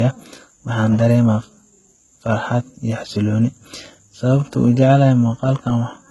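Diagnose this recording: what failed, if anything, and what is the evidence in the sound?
The codec stage is where this went wrong, and it's there for the whole clip: low-bitrate audio saved at a high bitrate. The speech has nothing above about 11.8 kHz and carries the swirly, smeared texture of a very starved encode, even though the file itself is a fat MP3. That most likely means a roughly 16 kbit/s HE-AAC source was re-encoded at around 300 kbit/s. The bigger second pass can't restore anything the first one discarded.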